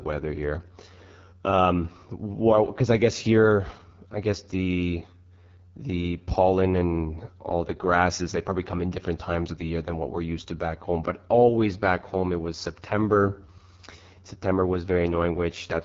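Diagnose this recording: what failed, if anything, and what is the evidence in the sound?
The failure is at the codec stage: AMR wideband (HD Voice) coding at its lowest rate, present throughout. The speech sounds rough and raspy from start to finish, which fits the 6.6 kbit/s mode. A spectrogram shows a hard ceiling with nothing above 7.5 kHz. Harmonics run only to about 6.4 kHz, and above that the band is smeared noise. The codec rebuilds the voice from a vocal-tract model and sparse pulses, then fills the top band with shaped noise.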